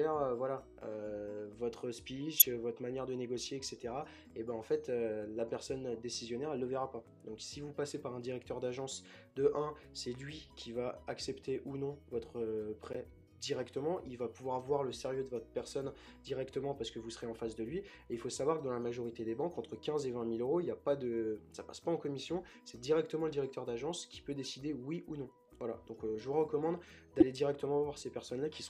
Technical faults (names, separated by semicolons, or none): corrupt frame decoded